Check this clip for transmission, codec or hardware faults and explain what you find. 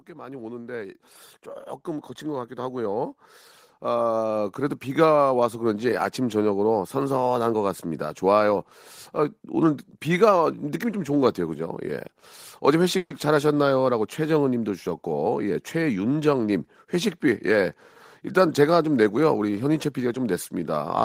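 The clip is speech and shows three kinds of fault: two slow level rises from automatic gain control, one brief call audio freeze, and a short stretch where the jitter buffer speeds playback up.

Automatic gain rising occurs from 0.06 to 1.10 s (about 5 dB) and again from 2.21 to 8.27 s (about 10 dB). The gain control judged the input too quiet and raised it gradually. Unlike a talker simply getting louder, the background noise swells along with the voice.

A call audio freeze runs from 12.97 to 13.12 s. For 130 ms the last sound is stretched into a fading buzz or hiss rather than falling silent. The likely cause is late packets draining the jitter buffer. Unlike a dropout, nothing is lost: the speech resumes exactly where it stopped, with 130 ms more delay.

A jitter buffer speed-up follows from 15.26 to 16.34 s, with playback running at 110% speed and roughly a tenth of a second trimmed away. 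The receiver cut short pitch-period pieces to reduce excess buffered delay. Unlike a sped-up recording, the pitch stays unchanged, so the speech just sounds hurried.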